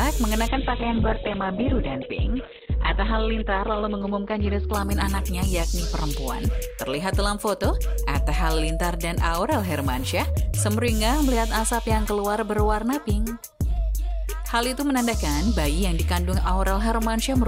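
From 0.49 to 7.79 s, a call bitrate drop leaves the sound watery and cut off above 4 kHz, degraded throughout rather than gapped like packet loss.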